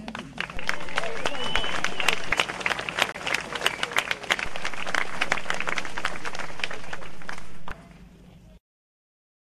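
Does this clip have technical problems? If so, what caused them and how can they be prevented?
Yes. At 0.57 s and again at 4.46 s there is a low thump or click as the waveform's zero line jumps, a DC step, lasting until 2.32 s and 7.71 s respectively, while the sounds themselves carry on unchanged. A converter recalibrating or an input with an offset being switched in shifts the baseline. Prevent it by high-pass filtering or AC-coupling the input and avoiding switching or recalibration during recording.

From 3.12 s to 3.15 s the audio cuts out briefly and then returns. This is a digital broadcast dropout: the receiver lost the signal or rejected corrupted frames and muted until good ones arrived. The roughly 30 ms gap fits a single lost frame of about 24 ms. Prevent it with a stronger, more stable reception path or a link with better error protection.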